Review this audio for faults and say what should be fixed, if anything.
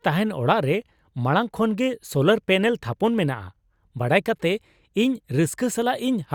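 Nothing stood out on listening to this speech recording, so there is nothing here that needs fixing.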